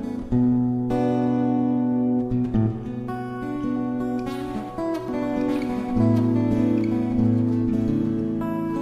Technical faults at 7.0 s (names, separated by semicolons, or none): doubled audio track